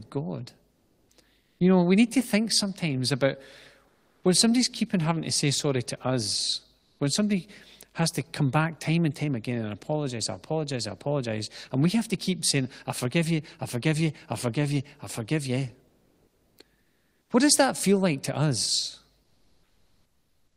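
During the speech pauses at 0.71–1.09, 1.41–1.59, 3.87–4.23 (after "to think sometimes about"), 6.79–6.99, 15.87–16.57 (after "you I forgive you"), 16.81–17.29 and 19.23 s to the end (after "feel like to us"), comfort noise replaces the background. The room tone, about 45 dB below the loud passages, becomes a flat, featureless hiss shifted about 1–3 dB, likely from Opus DTX halting transmission while the receiver synthesises filler noise.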